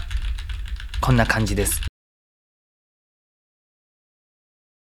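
At 1.88 s the sound cuts off abruptly into an audio dropout to silence that lasts to the end: the input was likely lost while recording continued, writing silence. The waveform flatlines completely, and the spectrogram goes uniformly blank, with no room tone.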